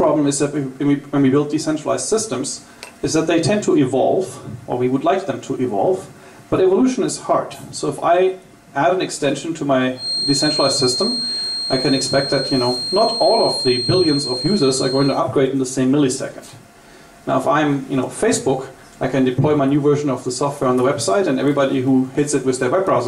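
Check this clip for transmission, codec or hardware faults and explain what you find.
One fault turns up: a feedback whistle. It runs from 9.94 s to 15.23 s. A thin, steady tone at 4.2 kHz sits behind the sound, only a little below its level. The tone swells and fades slowly in level but never builds. The likely cause is a loudspeaker-to-microphone loop held just short of runaway feedback. At that edge, one high frequency keeps circulating and ringing on its own. Then it stops at 15.23 s.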